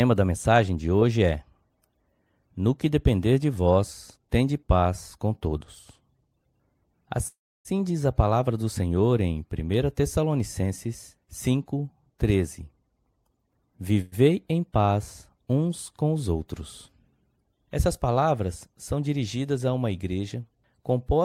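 It's a speech clip with two call audio freezes: at 7.27–7.68 s the sound hangs into a fading buzz, then silence, before "diz a palavra do," and again briefly at 14.01–14.15 s before "em paz uns com". That's likely delayed packets draining the jitter buffer, so a gap gets inserted and nothing is lost. Then, right after "paz uns com os," there's a jitter buffer speed-up from 16.88 to 17.43 s. The receiver trims pitch-period slices, about a tenth of a second in all, so the speech runs around 117% speed at unchanged pitch and sounds rushed.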